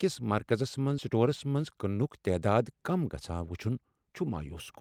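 A skip ahead at 0.98 s drops about a fifth of a second of speech: audio was lost while later audio was already queued, so playback leaps forward and the two sides of the cut are joined with no gap, making the speech sound clipped.

A jitter buffer speed-up follows from 1.11 to 2.03 s. Holding more audio than its target, the buffer repeatedly trimmed tiny pitch-period slices, about 50 ms in total, so the speech runs roughly 5% faster at unchanged pitch and sounds slightly hurried.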